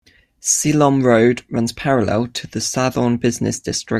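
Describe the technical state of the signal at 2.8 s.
At 2.8 s the signal is intact, with no audible dropout, distortion or other technical fault at that point.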